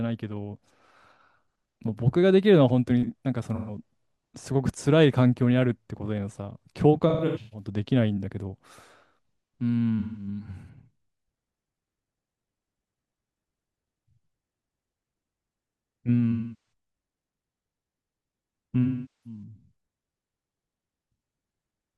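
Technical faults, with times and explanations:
3.55–3.77 s, 7.09–7.67 s, 9.99–10.27 s, 16.31–16.72 s and 18.83–19.43 s: AAC frame loss with concealment. Missing frames (gaps of 128 to 427 ms, fitting roughly 43 ms frames) are filled from the last good spectrum, giving smeared, phasey patches. The 7.09 s loss is scattered, with runs of up to about 150 ms.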